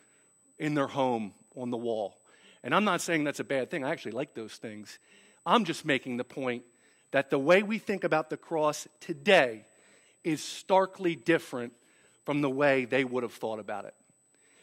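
A USB whine sits under the speech for the entire clip, a thin, steady high tone at 8 kHz, roughly 40 dB below the speech. It comes from the USB bus drawing current in 125-microsecond microframes, and that 8 kHz pulsing leaks into the audio path through shared power or ground. It sounds like a faint, fixed-pitch electronic whistle. A spectrogram shows it as a hard horizontal line at 8 kHz running edge to edge. It is too small to see on the waveform.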